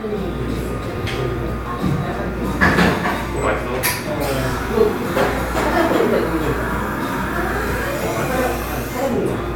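No technical faults are audible.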